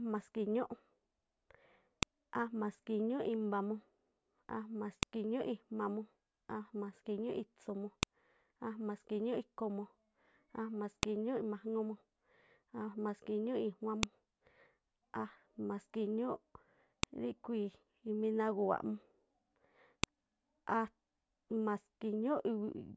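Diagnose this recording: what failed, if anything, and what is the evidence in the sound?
Storage-stage splice fault: a file header played as audio makes sharp clicks at 2.03, 5.03, 8.03, 11.03, 14.03, 17.03 and 20.04 s, every 3 s, where unstripped WAV headers join pieces.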